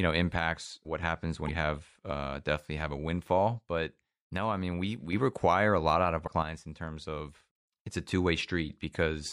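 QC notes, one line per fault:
0.59–1.03 s: one channel drops out. The speech level falls abruptly by about 6 dB, then returns. That fits the likely loss of one stereo channel before a mono sum, which halves shared content.
1.45–1.49 s: damaged data in a compressed stream. A brief glitch breaks the speech. Corrupt bytes make the decoder misread frames, lose sync and hunt for the next header.
3.59–5.13 s: one channel drops out, ending just before "require a lot out". Level drops about 6 dB for 1.5 s. This is likely one channel vanishing before the mono sum.
6.23–6.28 s: damaged data in a compressed stream, right after "a lot out of". A short blip as the decoder resyncs.
6.42–7.70 s: one channel drops out, ending before "it's a". The sound falls about 6 dB for 1.3 s, likely from one lost channel.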